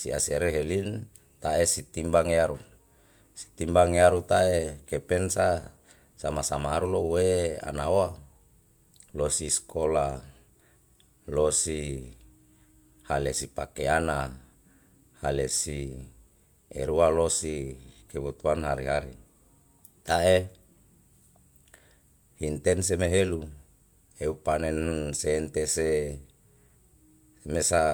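Listening closely to the speech from beginning to end, nothing stood out as a technical problem.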